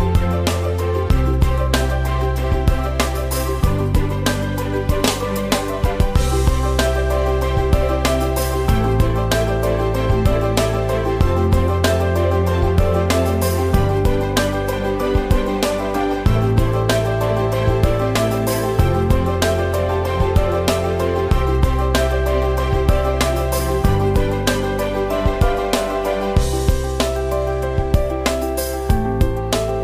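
No technical faults are audible.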